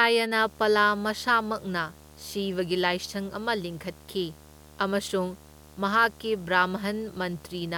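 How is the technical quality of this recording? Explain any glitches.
The recording's technical quality is compromised by one continuous fault. Video or display buzz runs from 0.41 s to the end at 7.77 s: a screen or its cable couples interference into the audio path, producing a 75 Hz buzz at the picture's field rate, with hash above it, about 25 dB below the speech.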